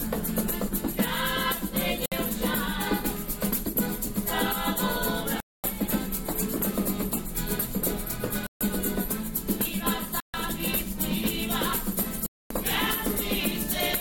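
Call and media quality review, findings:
Audio drops to dead silence five times, at 2.06–2.12, 5.40–5.64, 8.47–8.61, 10.20–10.34 and 12.26–12.51 s, each gap roughly 60 to 240 ms, then resumes. Likely a Bluetooth stall, where the headphone buffer runs dry while resent packets arrive.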